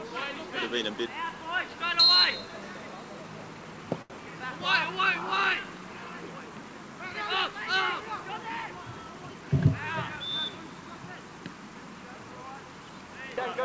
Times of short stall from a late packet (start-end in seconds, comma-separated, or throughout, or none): 4.02-4.12